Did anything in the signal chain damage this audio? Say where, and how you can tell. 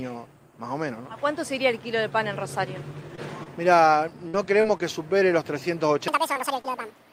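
Yes. Short concealed packet loss occurs at 3.15, 3.43, 4.61, 4.78, 6.34 and 6.61 s. This is network-stage damage. Each time, about 20 ms of audio failed to arrive before playout, and the receiver's concealment extended the preceding sound across the hole before crossfading back into real audio. You hear it as a small smear or wobble at each point. A very short transient landing in one of those gaps can disappear entirely.

A burst of packet loss occurs at 4.28 to 4.35 s, also at the network stage. Here about 60 ms went missing in a row, longer than a single dropout. The concealment carried the last sound forward and attenuated it as the gap went on, so the held portion sags into a buzz or hiss. The audio then picks up again further along, and the material that belonged in that stretch is gone.

A section at the wrong speed runs from 6.08 s to the end. Playback there runs at 1.96 times the original rate, so everything sounds rushed and raised in pitch by around ten semitones, with tempo and pitch shifting together. 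That coupling rules out a pitch-shift effect and points to a sample-rate or clock mismatch in editing or playback as the likely cause. The dropouts at 6.34 and 6.61 s fall inside this sped-up stretch.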